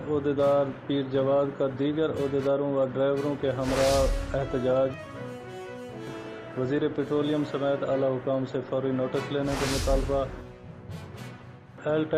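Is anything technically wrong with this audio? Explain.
No, nothing technically wrong stood out on listening to this audio.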